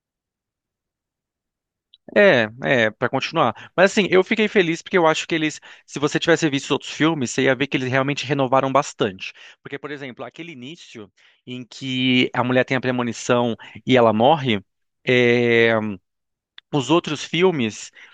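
No technical faults can be heard anywhere in this speech recording. Where the level rises or falls, it moves smoothly, like a fader being eased up or down.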